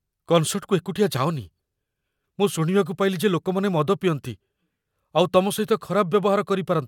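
A short speech recording with no technical faults to report. Nothing in the sound points to a problem anywhere in capture, processing or playback.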